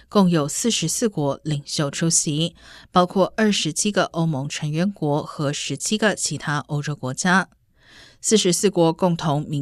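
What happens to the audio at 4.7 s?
Nothing goes wrong at 4.7 s: the speech there runs on cleanly, with no dropout, click, distortion or other audible fault.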